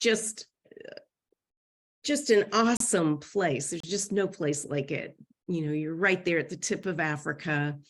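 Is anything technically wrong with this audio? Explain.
Yes. The speech is interrupted by three gaps between stream segments. The first runs from 2.77 to 2.80 s, about 34 ms of silence. The second runs from 3.80 to 3.84 s, about 32 ms. The third, at 6.83 s, is only about 6 ms long. Each is a hard-edged hole where the sound drops out abruptly. The timestamps of adjacent segments, which appear to be 1 s long, leave a small space between them. The player fills that space with silence. No audio is lost, but the clip gets slightly longer.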